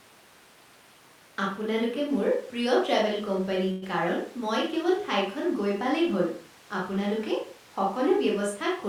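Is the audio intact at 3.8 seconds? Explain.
No. A call audio freeze runs from 3.71 to 3.84 s, likely from delayed packets draining the jitter buffer. The last sound stretches into a fading buzz before "কাৰণ মই কেৱল" resumes, nothing lost.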